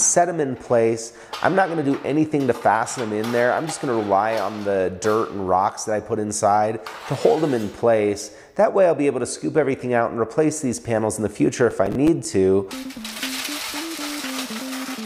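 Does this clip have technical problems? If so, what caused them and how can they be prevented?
Yes. Processor overload crackle runs from 11.71 to 12.25 s. About ten short buffers, around 5 ms each, missed their deadlines and replayed stale audio, causing gritty tearing. Prevent it by reducing processing load or using larger buffers.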